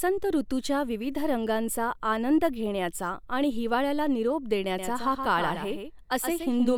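A doubled audio track appears at 4.79 s and runs to the end: a second, full-band copy of the speech, about 5 dB quieter, trails roughly 150 ms behind, starting abruptly with no decay or room colour. It was likely captured again through a slower path.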